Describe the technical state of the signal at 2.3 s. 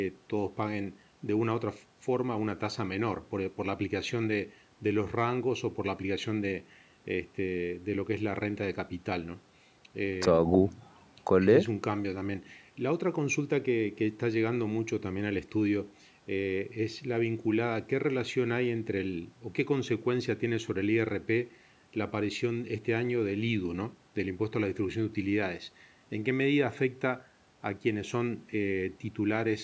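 At 2.3 s the speech signal is intact, with nothing wrong beyond the normal call microphone processing, which limits the band to 8 kHz and trims the lowest bass.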